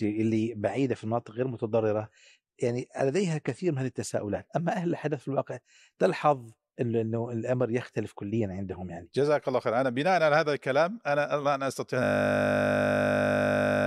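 From 0.0 to 4.0 s the speech is dull, with nothing above about 14.3 kHz and heavier codec smearing, the sound of an adaptive stream starting at a low bitrate. At 4.0 s quality jumps with no gap, unlike a rebuffering stall.

At 12.04 s a system hang loop begins: one 20 ms piece repeats exactly until the end, giving a steady 50 Hz buzz rather than irregular dropout clicks.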